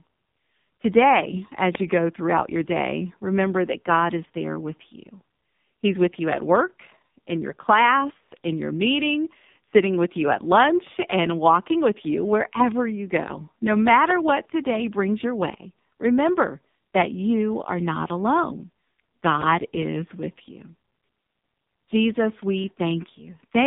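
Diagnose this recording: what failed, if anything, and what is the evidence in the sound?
The codec stage shows AMR narrowband mobile codec damage throughout. The speech sits in a 150 Hz to 3.7 kHz band with nothing above, and sounds heavily buzzy and synthetic, which fits a low AMR-NB mode of about 5.9 kbps, with its pulse-excited vocal-tract model running out of bits.

Two loud pops, one at 1.75 to 1.77 s just before "you go throughout your" and one at 14.10 to 14.13 s before "what today brings your", stand well above the speech. Each is a single sharp transient over continuing audio, likely an electrical step from a connector or switch in the analogue wiring.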